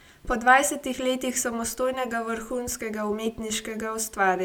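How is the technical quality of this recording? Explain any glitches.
No glitches turn up anywhere in this one, so there's nothing here to explain.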